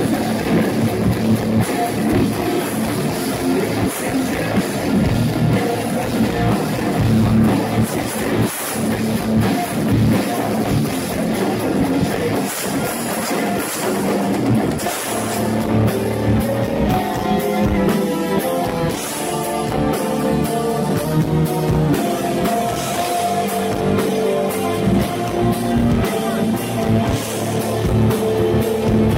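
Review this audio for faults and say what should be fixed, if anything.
A drift correction step is the likely cause: software reconciling two clocks abruptly changed the playback rate to refill or drain its buffer. The sound speeds up by 5.4% and rises 92 cents, almost a semitone, from 16.45 to 17.77 s and again from 21.05 to 21.88 s, then snaps back to normal pitch and tempo. Fix this by using gradual, continuous resampling for clock correction instead of stepped rate changes.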